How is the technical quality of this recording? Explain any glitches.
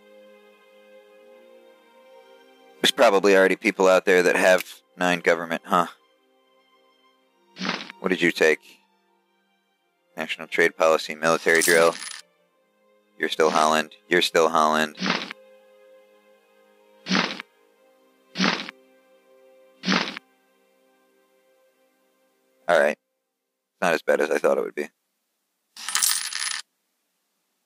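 One glitch stands out, in the last second and a half. Crude rate conversion runs from 26.23 s to the end at 27.66 s. Samples were linearly interpolated to a new rate, which fits a 48 kHz to 44.1 kHz change, with no filtering. The resulting error, about 20 dB below the signal, forms shifted, inharmonic copies that sound like a gritty buzz or fizz following the louder and higher parts of the sound.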